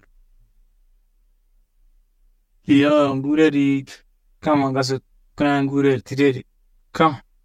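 Channel delay (comb filtering) runs through the whole clip: one channel arrives around 10 ms behind the other, and summing them to mono cancels shared content at evenly spaced frequencies starting near 50 Hz, carving fixed notches that leave the speech hollow and phasey.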